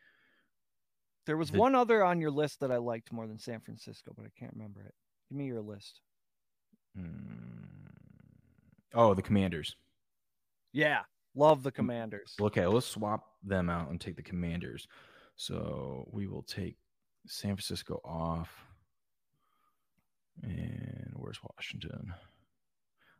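Three sharp single clicks land at 2.72, 11.50 and 20.61 s in the speech, each showing as a thin vertical line. They're likely dropped samples: a fraction of a millisecond goes missing, so the waveform jumps straight to a later value.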